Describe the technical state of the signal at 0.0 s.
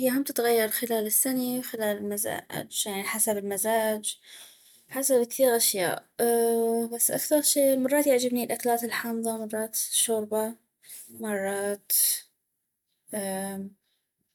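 At 0.0 s the speech signal is intact, with no audible fault at that moment.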